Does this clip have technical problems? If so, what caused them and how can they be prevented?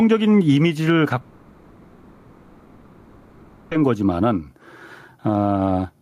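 Yes. Throughout the speech, levels swing around 10 dB, so the speech sounds squashed. This is gain pumping, likely from input gain set far too high with a fast limiter pulling it down. Setting microphone gain lower and using gentler, slower compression prevents it.

From 1.21 s to 3.73 s, the last sound is stretched into a fading buzz or hiss before speech resumes with roughly 2.5 s of content lost. This is a long network dropout; the likely cause is no audio arriving, with the receiver covering the gap. A more stable connection or larger jitter buffering prevents it.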